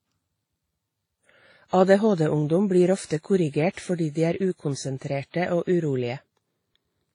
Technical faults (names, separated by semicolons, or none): transcoding between lossy codecs